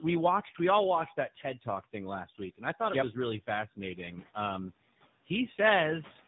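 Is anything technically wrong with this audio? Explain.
Yes. Tandem speech coding runs throughout. Two speech coders were applied in series, the second re-coding the first's losses. The speech sounds rough and muffled, with nothing above 3.8 kHz.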